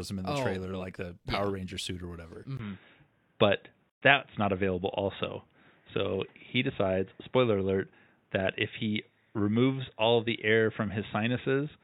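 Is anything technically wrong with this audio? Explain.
Yes, there are two faults. At 2.57 s the sound turns dull and boxy for the rest of the clip, with nothing above 3.8 kHz, a 20 ms silence at the change, roughly a 5 dB level shift, and new background noise around 40 dB below the speech. The likely cause is an input switched to a poorer device. A simple low-pass filter or codec bandwidth drop would not change the tone, level and noise floor together, or leave a short silence at the changeover.

From 3.90 to 4.02 s there is a 124 ms gap at a join of encoded pieces. Separately encoded sections were joined with their start-up delay and end padding still in place, which fits pieces about 10 s long. The edges are smeared, and the speech resumes exactly where it stopped. That distinguishes it from a packet dropout, where some of the sound would be lost.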